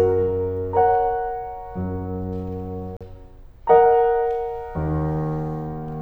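At 2.97 to 3.01 s the music drops to silence for 40 ms, then resumes, most likely a Bluetooth stall where delayed packets briefly emptied the playback buffer.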